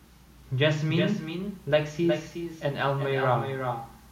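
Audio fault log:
throughout, echo with no canceller: the far end's loudspeaker feeds its microphone unremoved, so the speech returns around 400 ms later as a thinner copy about 7 dB down.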